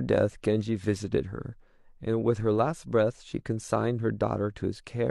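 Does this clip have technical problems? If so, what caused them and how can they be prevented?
No, there are no technical problems to hear in this speech clip. Nothing here needs a cause traced or a fix put in place.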